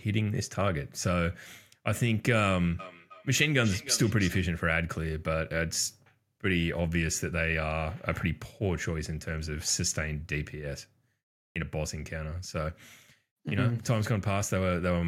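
Feedback echo between two devices runs from 2.79 to 4.48 s in this speech: a second device in the room replays the call, the microphone recaptures it, and the repeats return roughly every third of a second, peaking about 13 dB below the speech.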